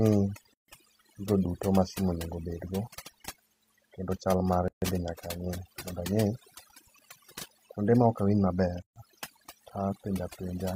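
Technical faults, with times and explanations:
Throughout: overdone noise removal. The background drops and breaks up into twinkling specks. An aggressive noise reducer is cutting frequency bands close to its noise estimate, taking the quieter parts of the voice with them.
0.54 s, 4.68 s and 8.82 s: gap at a join of encoded pieces. Silences of about 145 ms, 139 ms and 139 ms, spaced 4 s apart, break continuous speech with smeared edges. Untrimmed encoder start delay and final-frame padding remain at each join.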